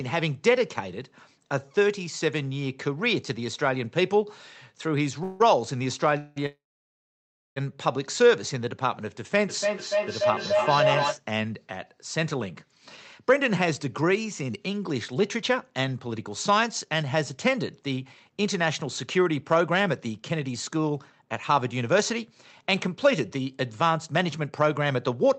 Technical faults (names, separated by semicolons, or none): call audio freeze; feedback howl; jitter buffer speed-up